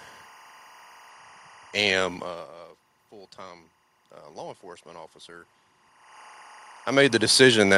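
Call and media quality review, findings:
Timecode bleed, whole clip: steady chirpy warble behind the speech, flipping between tones near 1 kHz and 2 kHz, sitting roughly 25 dB below the talker. That's linear timecode leaking in from a neighbouring track or cable; the warble's rhythm fits 23.976 fps code. Worth checking routing and cable separation.

Automatic gain rising, 3.1 to 5.55 s: speech and room background swell up together, about 3 dB over a couple of seconds. The input dropped about 19 dB, so the AGC slowly cranked gain to compensate. The level changes around 2 s and 6 s are just the talker moving.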